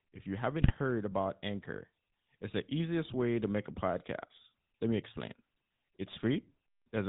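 From the start to the end, the speech carries the sound of the GSM full-rate codec. The damage is plainly audible. The codec models the vocal tract and excites it with a sparse train of regular pulses. The voice takes on a buzzy, gravelly edge. Nothing above 4 kHz survives, so sibilants lose their hiss. The coarse, grainy texture fits the old 13 kbps full-rate coder.

At 0.62 s, GSM bit errors break in and last until 0.73 s. Corrupted bits reached the decoder across a handful of consecutive frames. Wrong filter, pitch and gain values bend the spectrum and jolt the level. The voice squawks and gargles for about a tenth of a second. The density of the damage points to an error rate of roughly 2 percent.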